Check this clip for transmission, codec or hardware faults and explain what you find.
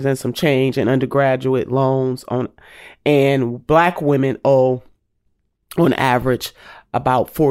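No faults turn up anywhere in this clip.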